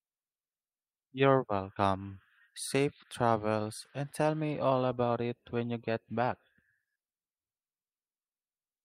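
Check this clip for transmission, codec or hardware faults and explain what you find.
No transmission, codec or hardware faults are audible anywhere in this speech recording; the signal stays continuous and stable throughout.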